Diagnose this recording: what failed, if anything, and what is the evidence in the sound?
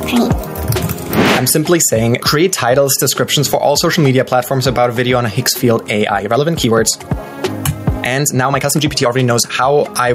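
Gain pumping runs the whole way through. The level ducks by something like 15 dB under each loud sound and swells back between them, so loud and soft parts sit squashed closer together. That's likely input gain cranked far too high with a fast limiter clamping down on each peak.

From 6.02 s to the end at 10.14 s there's a time-stretched section. The pace jumps to about 1.37 times speed and sounds rushed, but the pitch doesn't rise. It's likely software processing that fit the section to a length by dropping short slices rather than resampling.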